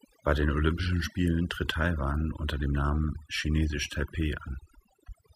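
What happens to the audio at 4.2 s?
At 4.2 s you're hearing overdone noise removal, and it's there for the whole clip, not just that moment. The reducer was pushed too hard: any frequency band sitting close to its noise estimate gets pulled way down or muted, taking the softer parts of the speech along. So the gaps go almost silent with little twinkling specks.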